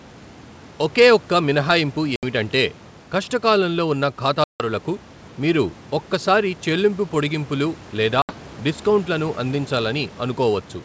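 At 2.16, 4.44 and 8.22 s the speech drops into hard-edged silent gaps of about 70, 160 and 70 ms, the middle one spanning roughly fifteen packets. This is packet loss on an ADPCM call. The decoder's predictor and step size lose track of the sender's, so each resumption comes back with brief distortion. On the waveform each gap is a flat line with sharp edges. A spectrogram shows blank columns.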